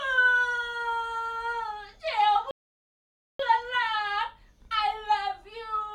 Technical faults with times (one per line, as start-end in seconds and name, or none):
2.51-3.39 rebuffering stall